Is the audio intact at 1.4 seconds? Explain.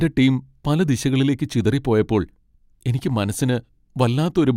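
Yes, the audio is intact at 1.4 seconds, with no dropout, click, distortion or other fault at that moment.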